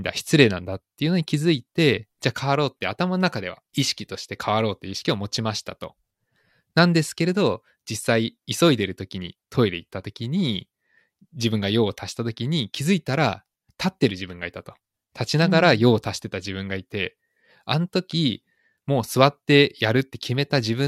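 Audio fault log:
Nothing in the speech stood out as a problem on listening.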